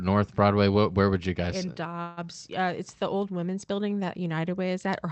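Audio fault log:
2.01–2.27 s, call audio freeze: the sound stalls and is bridged by about 0.16 s of fading buzz continuing the last sound, likely because packets were held up and the jitter buffer ran dry. Playback then resumes where it stopped, losing nothing but running 0.16 s late.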